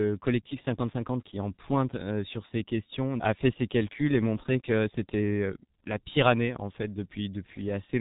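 Speech passed through the G.723.1 codec for its whole length, heavily damaged at a rate that fits roughly 6.3 kbit/s: nothing above 3.8 kHz survives, leaving it muffled, hoarse and smeared at consonants.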